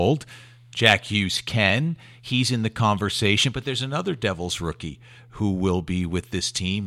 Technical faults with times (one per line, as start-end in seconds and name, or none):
0.76 block of digital silence